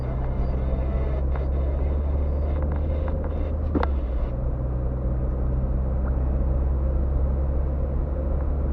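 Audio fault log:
2.40–3.06 s, jitter buffer speed-up: the receiver trimmed a backlog of buffered audio by repeatedly cutting out short pitch-period-length pieces, around 40 ms in total. The sound plays about 5% fast at unchanged pitch, giving a brief hurried, slightly compressed feel.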